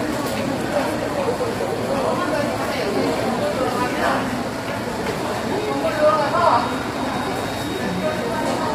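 An everyday-sound recording carries heavy low-delay AAC compression artefacts from start to finish. The audio has a rough, grainy texture, with noise filling the gaps between tonal components and a top band that sounds dulled and partly synthetic. This is likely AAC-ELD, the low-delay codec used in video calls, at a bitrate around 24 kbps. Its very short frames resolve fine spectral detail poorly, so the bit budget runs out and high frequencies are approximated.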